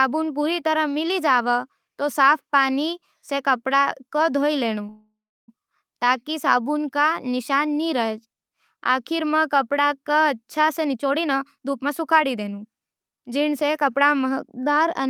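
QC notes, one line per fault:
4.89–5.50 s, call audio freeze: The sound stops and a fading buzz fills in, then about 340 ms of silence. Packets were likely held up, so the jitter buffer ran dry. Nothing is lost. The audio resumes where it stopped, 585 ms later.
10.69–14.58 s, jitter buffer speed-up: The audio runs at about 115% speed with the pitch unchanged and sounds hurried. The buffer held too much delay, so the receiver cut many tiny pitch-period slices, roughly 0.7 s in total.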